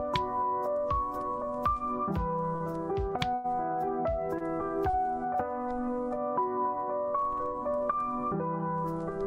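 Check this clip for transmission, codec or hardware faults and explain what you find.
Four brief interruptions show up, all of them timing holds rather than lost audio.

Short stalls from a late packet occur at 2.55 to 2.62 s, 4.38 to 4.42 s and 4.90 to 4.95 s. The sound hangs for 48 ms, 24 ms and 27 ms with a faint buzz or dip. A packet arrived late, the jitter buffer emptied, and the receiver stretched the last sound until it could resume unchanged.

A call audio freeze runs from 3.34 to 3.46 s, about 100 ms. The sound turns into a held, fading buzz or hiss that never reaches silence, then carries on from the same point. The likely cause is packets delayed in transit draining the jitter buffer, adding a gap without losing audio.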